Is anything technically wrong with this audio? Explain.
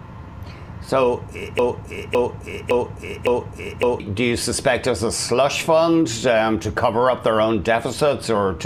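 Yes. From 1.59 to 4.0 s there is a broken-record loop: the player or stream likely stalled and kept resending its last fragment. A 560 ms piece repeats exactly four times, back to back, and the audio due in that span is lost.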